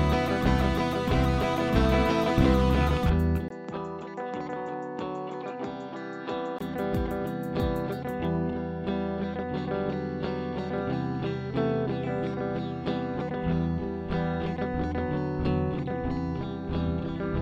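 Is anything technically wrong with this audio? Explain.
Yes. From 3.48 to 6.61 s the sound changes character abruptly. A gap of 20 ms marks the switch. After it, nothing above 7.6 kHz remains, so the top end turns dull and boxy. The level drops by roughly 5 dB. A new, faint noise floor appears, well below the signal. At 6.61 s the fuller sound returns. This is likely an input switched to a poorer device, one with a narrower band, its own tone, and its own background noise.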